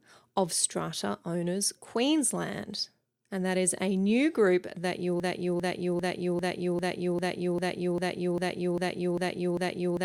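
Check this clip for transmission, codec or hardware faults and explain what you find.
There's one real problem here: a broken-record loop that takes over the second half of the speech. Right after "new group that you", at about 5.20 s, a chunk roughly 0.40 s long starts repeating exactly, back to back, twelve times, and it keeps going right to the end. That's likely the player or stream stalling and resending the last fragment it had in its buffer, so whatever should have followed is simply gone.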